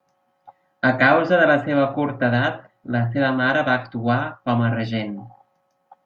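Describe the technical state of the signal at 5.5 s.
At 5.5 s the speech signal is intact, with no audible technical fault at that moment.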